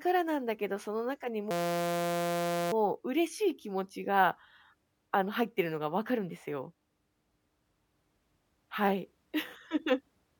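Speech, where the system hung from 1.51 to 2.72 s: the computer or driver froze while the sound hardware kept cycling one 5.8 ms stretch of its ring buffer, which fits a 256-sample buffer. This system hang loop interrupts the speech with a steady 172 Hz buzz.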